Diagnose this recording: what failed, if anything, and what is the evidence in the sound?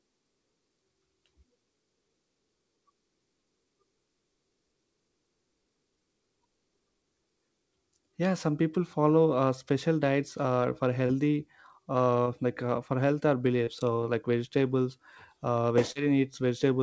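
Network packet loss, hidden by concealment, is the failure. Short smears occur at 11.06, 12.23 (just before "like uh"), 13.64 and 15.92 s. Each hole is about 30 ms. The receiver stretched the preceding sound across it, then blended back.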